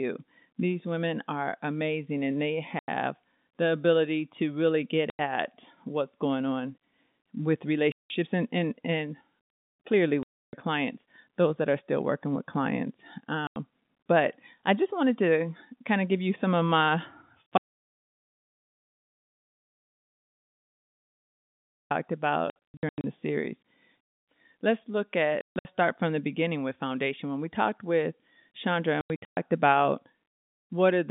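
Hard-edged holes punch through the speech at 2.79, 5.10, 7.92, 10.23 and 13.47 s. The one at 7.92 s falls after "what's going on with" and before "and and and", and the one at 13.47 s falls between "still working with clients" and "but I just wanted". These are packet loss filled with silence: the receiver substituted dead air for missing packets. The gaps run 90 ms at 2.79, 5.10 and 13.47 s, 180 ms at 7.92 s, and 300 ms at 10.23 s, all whole multiples that fit 30 ms packets.

After "you some of my" at 17.58 s the sound stops completely, with no room tone at all, until 21.91 s, about 4.3 s later. This is an audio dropout to silence: silence was written while the input was absent, likely from a lost link or a stray mute. Everything in that span is missing, and the speech resumes abruptly.

The packet loss returns in clustered form at 22.50, 25.41 and 29.01 s. Here several short holes are scattered over windows of 540, 240 and 360 ms, with longest runs of 90, 150 and 120 ms. 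The result is a rapid, stuttering chop rather than single gaps, all heard through the narrow 150 Hz to 3.7 kHz band of G.711 telephone coding.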